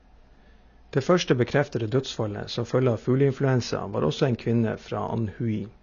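Throughout the speech, the signal appears to have passed through a lossy encoder starved of bits, most likely AAC compression at a low rate in the AAC-LC profile, which fits a bitrate of around 24 kbps. With so few bits, the encoder discards the top of the spectrum, leaving nothing above 7 kHz, and quantises the remaining bands coarsely. The result is a plainly audible dull, muffled tone, with smeared, warbling sibilants and a fizzy edge on sustained sounds.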